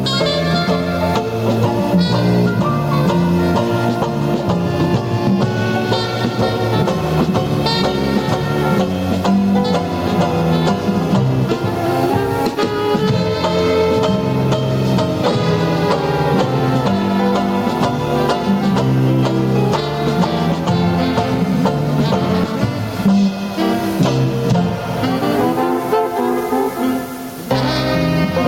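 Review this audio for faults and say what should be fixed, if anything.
Gain pumping runs through the whole clip. The level swings by around 15 dB, pulled down on each loud sound and released after. Loud and soft parts sit closer together, and the sound is squashed. The likely cause is input gain set far too high, with a fast limiter or compressor clamping every loud moment. To prevent it, lower the input gain and loosen the limiter's settings.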